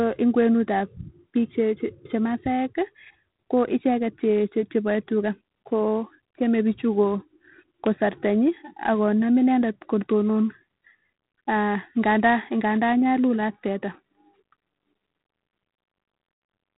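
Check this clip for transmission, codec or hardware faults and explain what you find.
There's one fault here, and it runs through the whole clip: G.726 ADPCM coding, with plainly audible damage. The speech sounds like it went through a telephone-grade ADPCM codec at a low rate, which fits 24 kbit/s. Each sample is sent as just a few bits of difference from an adaptive prediction, so the quantising error is coarse. You hear it as a harsh, rasping hiss that rises and falls with the speech level. The band also stops at 3.9 kHz, so nothing above that gets through.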